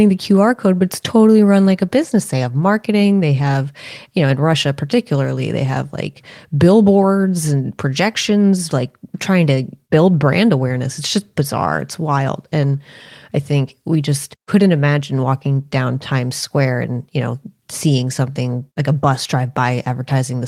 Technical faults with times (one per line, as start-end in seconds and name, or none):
none